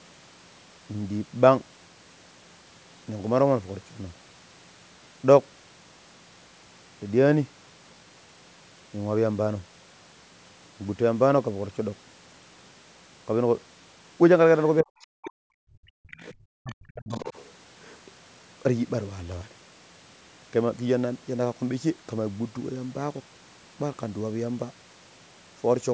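From 14.82 to 14.94 s and again from 15.10 to 15.35 s, the speech dips sharply and breaks up, likely speech suppressed in double talk, with the echo canceller turning down both talkers at once. Between 15.63 and 16.11 s the room background drops by about 40 dB, then returns; this is background gated by the echo canceller while the loudspeaker played. From 16.11 to 16.35 s, a faint second voice sits well under the speech, likely the other side's voice leaking through past the echo canceller. From 16.53 to 17.18 s the speech is cut down deeply once more, likely the same double-talk suppression. Within that stretch, from 16.70 to 16.75 s, a brief, very quiet scrap of the far voice slips through, likely more leakage. From 17.10 to 17.44 s that leaking voice is louder, about 15 dB below the speech, likely residual echo the canceller failed to remove.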